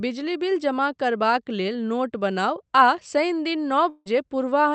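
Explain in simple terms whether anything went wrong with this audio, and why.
From 3.89 to 4.08 s the sound turns into a fading buzz, then briefly goes silent, most likely a long network dropout where audio stopped arriving and was lost.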